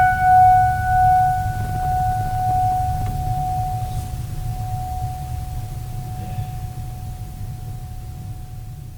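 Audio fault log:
3.01–3.03 s, skip ahead: The music jumps forward with no gap filling the join. Roughly 0.7 s of audio is gone. Later audio was already waiting, so the missing stretch was dropped and playback resumed straight after it. The two sides meet abruptly.
3.36–6.03 s, jitter buffer speed-up: The music runs at about 106% speed but keeps its pitch. Right after the skip, the buffer held more audio than its target. Short pitch-period pieces were cut repeatedly, about 150 ms in total. The tempo sounds hurried and unsteady.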